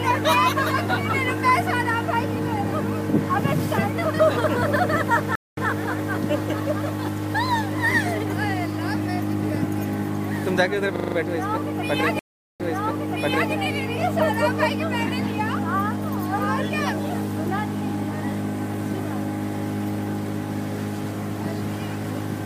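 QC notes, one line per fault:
5.35–5.68 s, stream reconnect: the connection drops to 218 ms of silence, then a fresh decoder picks up 110 ms earlier, so a short stretch repeats and fades in.
10.96–11.16 s, system hang loop: a 40 ms piece of audio repeats exactly five times at 25 Hz while the frozen system leaves the hardware cycling its ring buffer, with practically nothing lost.
12.19–13.53 s, stream reconnect: 406 ms of silence, then the restarted decoder resumes 930 ms earlier as the server resends a burst, replaying nearly a second with a fade-in.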